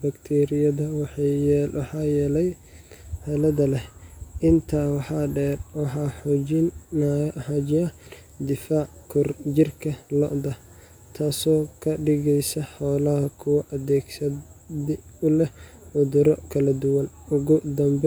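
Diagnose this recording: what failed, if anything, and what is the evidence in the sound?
Nothing in the recording points to a failure at any stage of the chain. The speech runs without any audible event that would call for a diagnosis.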